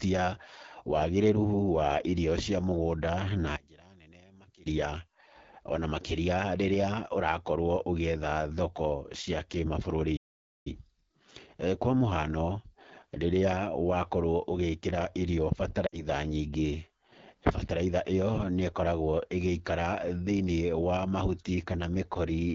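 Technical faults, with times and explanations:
Throughout: AMR wideband (HD Voice) codec at 8.85 kbit/s. This low rate leaves the speech plainly rough and raspy, with a noisy top band.
3.56–4.66 s: One channel inverted, likely. After "irio cia mũgũnda" the voice drops about 24 dB, as the channels cancel when summed to mono.
10.16–10.67 s: Playback stall. The speech stops dead for about half a second, likely because the player ran out of data, then resumes.
15.87–16.04 s: Lost AMR speech frames. The voice drops to near silence within two frames of a 60 ms gap, which fits three lost frames, then returns briefly weak or rough.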